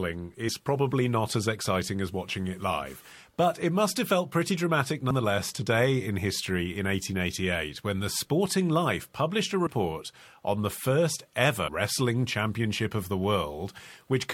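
Compressed frames skipped: the decoder lost whole frames at 5.10 s, 9.66 s and 11.67 to 11.69 s, so the speech jumps ahead by roughly 70, 50 and 100 ms. That fits a few frames each time.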